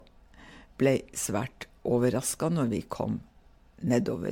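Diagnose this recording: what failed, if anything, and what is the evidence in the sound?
The fault is at the codec stage: generation loss runs through the whole speech clip. The sound is swirly, smeared and hollow, with consonant attacks blurred, which points to MP3 at around 96 kbit/s, likely re-encoded roughly seven times. Each pass quantises again on a shifted frame grid, so noise and gaps compound. On a spectrogram, content stops at 19.4 kHz and mid-high bands show scattered holes and flickering patches, with transients smeared in time.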